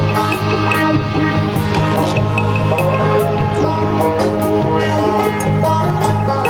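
From start to finish, the level of the music is pulled up and down, a gain swing of around 5 dB that keeps the level breathing in and out. Loud and quiet passages sit unnaturally close together, and the whole mix feels squashed. This is gain pumping, likely caused by the input gain being set far too high, so a fast limiter or compressor clamps down on every peak and releases between them.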